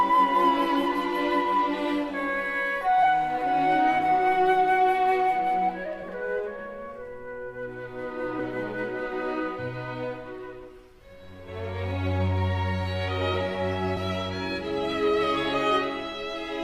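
At 3.02 s the audio jumps forward, skipping about a tenth of a second: compressed frames skipped. Whole frames were lost or rejected as damaged by the decoder, so playback resumes further along. The join lasts until about 3.06 s. A spectrogram shows an abrupt discontinuity at the join.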